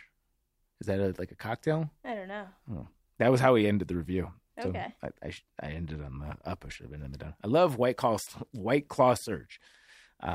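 Speech, with no audible technical fault anywhere in the recording.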